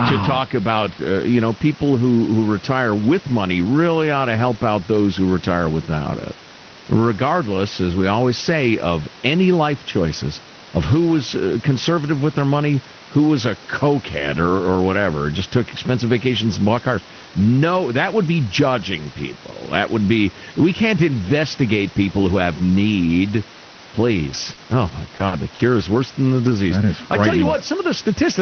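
At 24.33 to 24.35 s a lost packet was rebuilt from error correction: the next packet carried a low-bitrate Opus copy of it, so there is no gap, only 20 ms of rougher, noisier sound. A short concealed packet loss follows at 24.53 to 24.59 s, where 40 ms never arrived and the decoder extended the preceding sound, heard as a brief smear or wobble. The same concealed loss recurs at 25.15 to 25.21, 25.27 to 25.33 and 25.55 to 25.61 s. In each, the final 20 ms (25.19, 25.31 and 25.59 s) is again rebuilt from the error-correction copy, which adds a grainy patch just before the real audio resumes.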